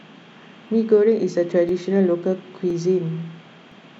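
The speech was handled in 1-second chunks, and each new chunk began 12 ms before the previous one had finished, so the audio at every join was played twice. This overlapping-chunks fault shows up at 0.68, 1.69, 2.70 and 3.72 s, roughly once per second. Each time, a 12 ms slice of the speech repeats, which is heard as a click or stutter.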